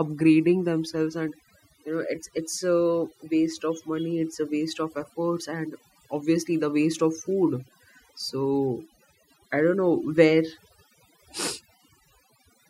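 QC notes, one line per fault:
Throughout: overdone noise removal. The noise reduction was set too strong, so frequency bands near its noise estimate are pulled far down or switched off, taking the quiet parts of the speech with them. The background drops and breaks up into twinkling specks.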